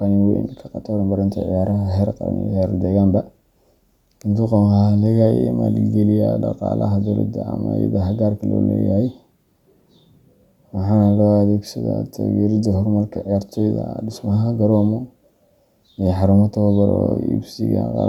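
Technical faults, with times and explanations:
Nothing stood out on listening to the speech recording.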